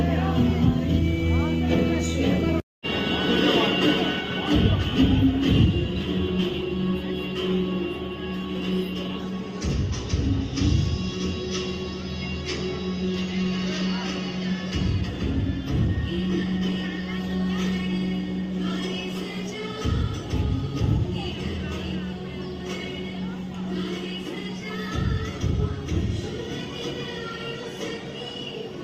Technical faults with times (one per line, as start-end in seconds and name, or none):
none